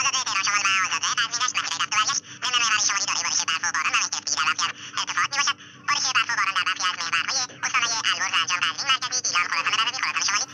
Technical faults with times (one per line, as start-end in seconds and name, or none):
0.00-10.54 wrong sample rate